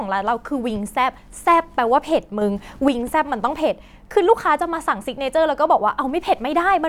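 At 2.42 s the speech and its background noise step up together by about 5 dB, stay at that raised level until 2.88 s, then drop straight back. This is a sudden gain jump, likely from a digital gain setting applied without a ramp. Unlike a speaker getting louder, the noise floor rises with the speech. Unlike automatic gain control or compressor pumping, there is no gradual attack or release. The level changes abruptly at both edges.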